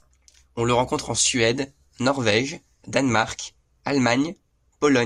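Nothing in this speech recording stood out on listening.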